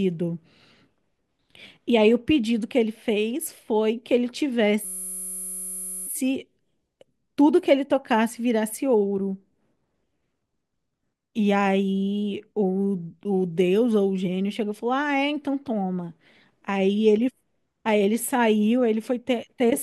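From 4.85 to 6.07 s, a system hang loop repeats one 5.33 ms slice exactly, giving a steady 188 Hz buzz rather than a stutter.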